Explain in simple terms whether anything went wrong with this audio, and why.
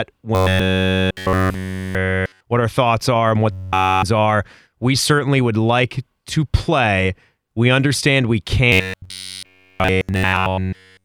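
The speech turns into a stiff, metallic buzz three times: from 0.35 to 2.41 s, from 3.51 to 4.03 s, and from 8.72 s to the end at 11.05 s. It still roughly follows the talking, but with a fixed hum near 94 Hz. This is robotic sound from repeated short buffers. The likely cause is new audio arriving too slowly, so the player loops a sliver about 11 ms long instead. During these stretches almost nothing real gets through.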